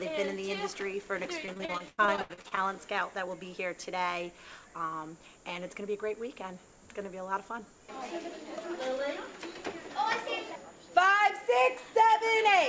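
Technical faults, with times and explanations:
1.46–2.59 s: repeated packet loss (robotic sound), with over a dozen dropouts up to 80 ms, each patched by stretching prior audio, giving choppy sound with pieces missing.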